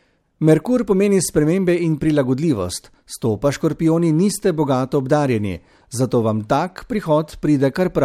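No technical faults are audible anywhere in the speech.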